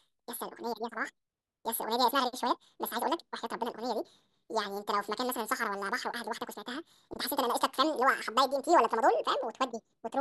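From start to finish, the speech plays at twice its proper rate. The pitch sits a full octave high, twelve semitones up. The audio was read two samples at a time, at double speed. The reader took each pair of samples as a single frame, as if the stream had two channels or wider samples. Time is halved and every frequency doubles.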